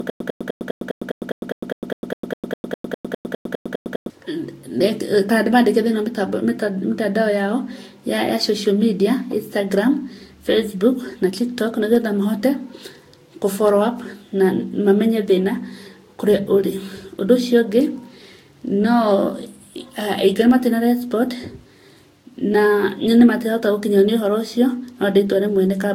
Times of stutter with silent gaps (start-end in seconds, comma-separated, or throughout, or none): 0.00-4.10